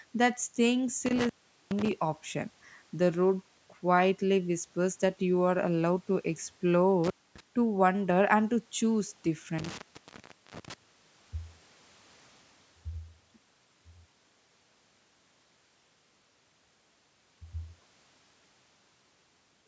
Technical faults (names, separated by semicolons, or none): intermittent contact